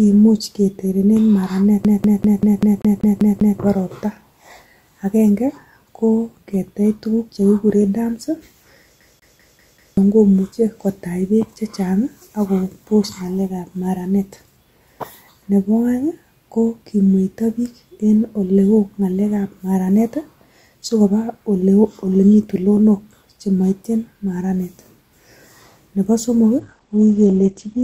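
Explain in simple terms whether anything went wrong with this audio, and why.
Two separate problems can be heard in this speech.

From 1.84 to 3.60 s, and again from 9.00 to 9.97 s, the sound skips like a CD stuck on one turn. A tiny slice of about 0.19 s repeats nine times the first time and five times the second, with a brief mute at each jump. The even, machine-like rhythm gives it away: it is a laser hopping back one track on a scratched disc, not a network dropout, which would leave gaps or smear rather than loop.

From 26.60 s to the end, the audio switches to an adaptive stream at a lower bitrate. The connection likely slowed, so the player swapped to a smaller, cheaper version of the audio. The crisp top end vanishes, with nothing above about 8.7 kHz, and the speech turns duller. Unlike a stutter or dropout, the sound never stops or repeats. Only the quality drops, suddenly and without a gap.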